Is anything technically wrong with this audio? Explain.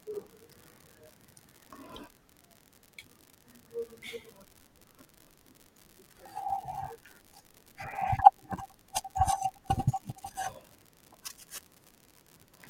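Yes, there's an unreliable data bit throughout: one marginal bit flips randomly, so each error is an identical spike of about -33 dBFS, giving a steady fizzy crackle that carries on through the pauses in the speech.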